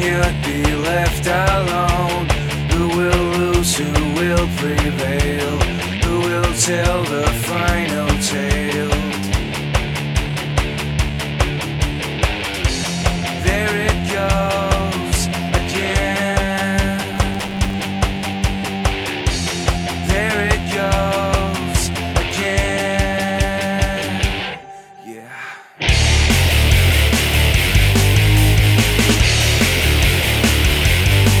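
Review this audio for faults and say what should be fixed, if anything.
From 17.13 to 17.85 s there is processor overload crackle: a burst of gritty tearing laid over the sound. The processor repeatedly missed its deadline for very short buffers of a few milliseconds. Dozens of those buffers came out as silent gaps with hard edges. To prevent it, reduce the processing load or use a larger buffer so each block has more time to finish.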